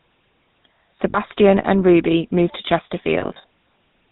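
From the start the speech goes through the GSM full-rate codec, roughly 13 kbps, its pulse-driven vocal-tract model cutting everything above 4 kHz and leaving a plainly buzzy, gravelly roughness. There are lost GSM frames at 1.1 to 1.18 s, about 40 ms, where the last good frame repeats and gives a short metallic ring. Around 3.2 to 3.44 s it happens again, 140 ms scattered across 240 ms with the longest run around 70 ms, so the ring comes in choppy bursts.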